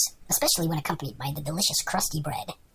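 The whole thing has a wrong sample rate: it's running 1.45 times fast and about 6.5 semitones high, consistent with 22 kHz audio played at 32 kHz.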